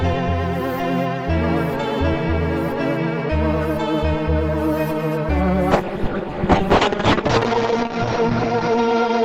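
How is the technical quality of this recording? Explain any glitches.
A call bitrate drop damages the music from 5.74 s to the end. The bandwidth estimate fell, so the encoder got far fewer bits. The sound suggests a fall from around 64 kbps to about 6 kbps. Coding coarsens, the top end closes from 20 kHz to 8 kHz, and for about 1.77 s at its worst the music sounds muffled, rough and watery.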